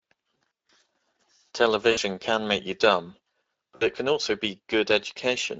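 Throughout, the speech passes through the Speex codec at a bitrate near 20.6 kbps, and the damage is plainly audible. The CELP coder has too few bits to model the excitation faithfully, so the speech sounds noisy and hoarse. Any content above 8 kHz is replaced by a shaped, noise-like fill instead of real detail.

From 0.41 to 0.70 s there is VoIP packet loss concealed by the speech codec. Lost frames are scattered across this stretch, and the longest gap runs about 60 ms. For each gap the decoder extends its last pitch and filter while reducing the gain, so the speech smears into a buzzy tone or coloured noise that fades. Short losses recur at 1.91 to 1.99 s and 3.75 to 3.88 s, and after each one the speech stays weak and distorted briefly before it recovers.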